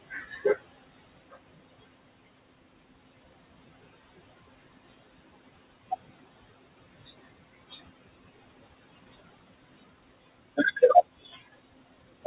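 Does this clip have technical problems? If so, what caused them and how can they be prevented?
Yes. Noise suppressor artifacts run through the whole clip. The room noise, about 16 dB under the speech, gets pushed down by about 17 dB between phrases and springs back underneath them. A milder suppression setting, or quieter room noise at the mic, would prevent it.

Speech cut by the noise suppressor shows up between 11.23 and 11.41 s. The suppressor mistook part of the speech for noise and dipped it by up to about 9 dB across roughly a tenth of a second, so that bit sounds swallowed. Less aggressive suppression with a slower release, or better mic placement for a cleaner signal, would keep it intact.

The band stops at 4 kHz, which fits a narrowband G.711-style call codec.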